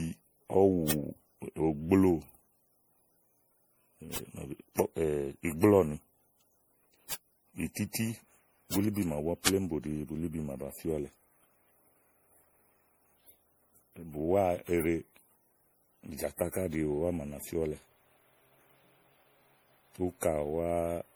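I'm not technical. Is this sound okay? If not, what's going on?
No. Generation loss runs through the whole recording: the speech sounds swirly, smeared and hollow, and the starts of sounds are blurred rather than crisp. The likely cause is that the file was saved as an MP3 over and over, about ten times. Each save squeezed the sound again in slightly different chunks, so the small damage from every round piled up instead of staying hidden.

There are also five bit error spikes, at 0.91, 4.16, 7.13, 8.74 and 9.47 seconds. Each is one sharp tick that has nothing to do with the speech. A single digital value got flipped, so the sound jumps to a wildly wrong level for an instant and then snaps straight back. At 9.47 seconds a few values in a row were hit, but it still comes across as one tick.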